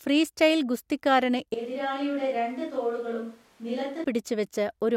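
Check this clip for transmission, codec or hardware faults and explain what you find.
One fault shows up. From 1.54 to 4.04 s there's a switch to a distant microphone. The speech suddenly goes roomy and thin, drops by roughly 10 dB, and room noise rises to about 30 dB below it. The likely cause is the close mic's feed dropping out and a far-off mic taking over.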